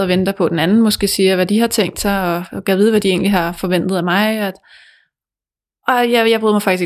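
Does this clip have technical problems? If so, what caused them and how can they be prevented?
No, no technical faults detected.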